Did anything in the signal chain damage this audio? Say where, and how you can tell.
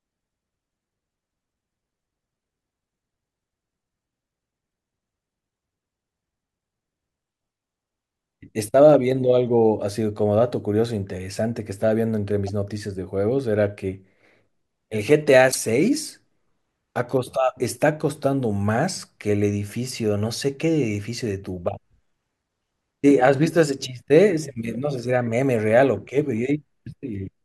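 Yes, at the codec stage: two abrupt blips interrupt the speech at 12.47 to 12.49 s and 15.48 to 15.56 s. That points to damaged data in a compressed stream. Corrupted frames are misdecoded, and the decoder loses sync until it finds the next valid frame header.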